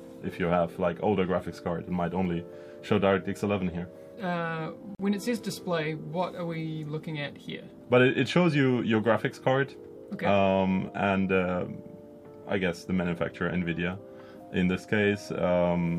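At 4.95 s the sound drops out for about 45 ms, to 4.99 s, then resumes exactly where it left off. This is a gap at a join of encoded pieces: two separately encoded segments were butted together without trimming, so the encoder's start-up delay and the padding on the final frame of the earlier piece both remain as silence. The cut-in and cut-out are softened by codec smearing, so the silent part is shorter than the full gap.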